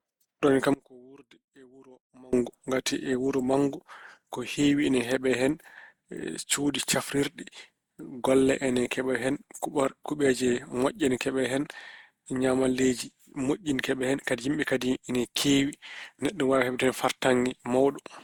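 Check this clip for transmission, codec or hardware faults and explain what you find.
Two faults stand out in the speech: a constant generation-loss character and one dropout early on.

Generation loss runs through the whole clip. The likely cause is repeated lossy re-encoding, around seven passes, and the texture suggests Opus at roughly 64 kbit/s. Each pass requantises on a shifted frame grid, so the speech sounds swirly, hollow and smeared, with soft attacks, even though content reaches about 20 kHz.

Audio dropout to a faint residue occurs from 0.74 s to 2.33 s, lasting 1.59 s. The speech cuts out abruptly rather than pausing or fading. The likely cause is the signal being lost upstream while the later path stayed live, so only faint sound about 25 dB below normal level remains.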